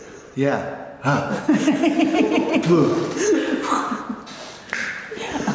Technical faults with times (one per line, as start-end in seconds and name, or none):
none